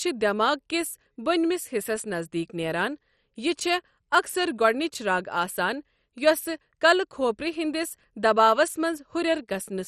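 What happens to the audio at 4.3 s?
At 4.3 s the speech carries the same damage heard throughout the clip: a dull, gurgling, granular texture with nothing above 13.7 kHz. This is likely heavy MP2 compression at a low bitrate, roughly 56 kbps, which starves the upper sub-bands and coarsely quantises the rest.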